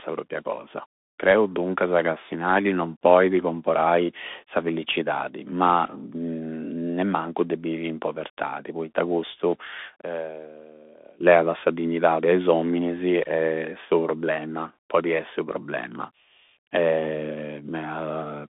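The speech has passed through a Bluetooth CVSD headset codec for its full length, which fits a 64 kbps CVSD stream coding one up-or-down bit per sample with an adapting step. The line is held to roughly 250 Hz to 3.6 kHz, with nothing above 3.8 kHz, so the sound is thin and boxy. Where the signal climbs faster than the step can follow, it distorts: s sounds turn scratchy, and a granular hiss sits plainly beneath the speech.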